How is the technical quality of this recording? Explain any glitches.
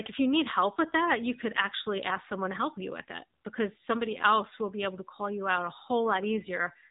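The quality is limited by one fault running through the whole speech clip. AMR narrowband mobile codec: low-rate vocal-tract coding cuts everything above 3.8 kHz, leaving muffled, plainly buzzy, synthetic-sounding speech, consistent with a mode near 7.4 kbps.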